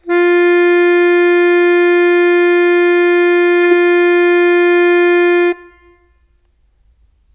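Listening closely to the music turned up nothing that stood out as a technical fault at any point.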